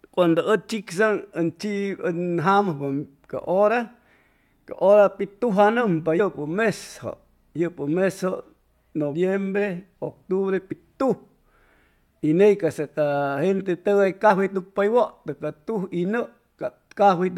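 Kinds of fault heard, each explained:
Compressed frames skipped: whole coded frames of the speech never reach playback, so the audio jumps ahead by about 40 ms at 6.19 s, about 20 ms at 10.71 s and about 40 ms at 14.29 s, which fits frames of roughly 21 ms.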